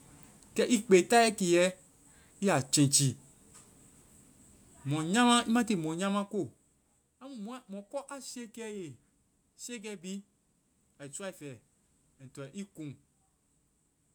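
No technical faults can be heard anywhere in the speech recording.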